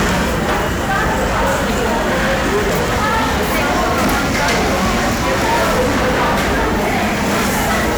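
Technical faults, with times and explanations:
Throughout: hard clipping. The level is driven about 13 dB past what the stage can pass, so roughly a fifth of the samples are cut flat. This gives a harsh fuzz on every loud sound, brittle high harmonics from the abrupt corners rather than the rounded warmth of soft saturation.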